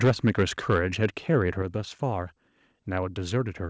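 Harsh, crackling distortion rides on the loudest parts of this speech clip from 0.03 to 1.37 s, where the peaks sound flattened and gritty. That is microphone overload, with the input set roughly 6 dB too hot so that the converter likely runs out of headroom and a few percent of samples have their tops sheared off, leaving that brittle edge. Early in that stretch, at 0.05 s, the level abruptly sinks by about 2 dB, and at 1.62 s, just after the distortion ends, it sinks again by about 5 dB, pulling the voice and the background down together. Both are the microphone volume stepped down, likely the call software reacting to the overloaded input by lowering the device gain in single jumps rather than gradually. All of it passes through a G.722 call path, which shows as the missing content above 8 kHz.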